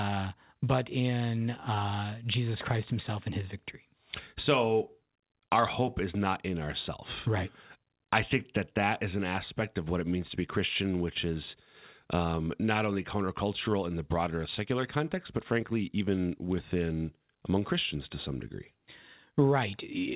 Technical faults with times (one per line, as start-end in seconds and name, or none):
none